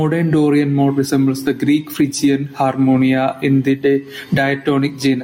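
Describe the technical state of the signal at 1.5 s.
At 1.5 s, gain pumping runs through the whole clip. Input gain is likely set far too high, with a fast limiter clamping down on every loud moment. The gain swings by around 10 dB, squashing levels together.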